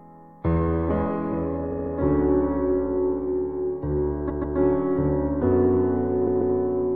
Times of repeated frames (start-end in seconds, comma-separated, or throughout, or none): 1.71-1.92, 4.29-4.57, 6.26-6.54